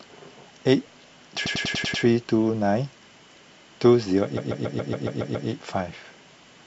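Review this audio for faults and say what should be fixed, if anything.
Repeated frames at 1.45–2.03 s and 4.36–5.48 s: a short stretch of compressed speech plays again and again, stuttering. First an 86 ms block repeats, adding 0.57 s. Later a 139 ms block repeats, adding 1.11 s. Prevent this by checking frame sequence numbers so duplicates are dropped before decoding.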